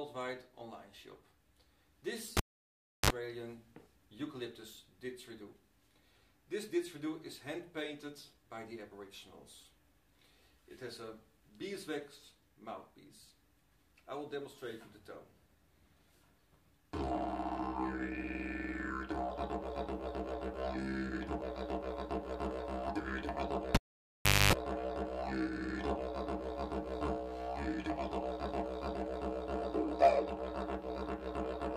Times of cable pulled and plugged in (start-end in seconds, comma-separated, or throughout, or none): 2.37-3.10, 23.75-24.53